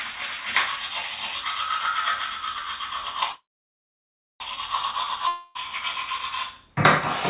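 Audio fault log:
3.32–4.42 s, call audio freeze: a brief fading buzz, then about a second of silence, after which the sound resumes where it stopped, likely because late packets emptied the jitter buffer.
5.28–5.57 s, long network dropout: the sound smears into a fading buzz for about 0.27 s, then continues with roughly 0.28 s missing, likely from packets that never arrived.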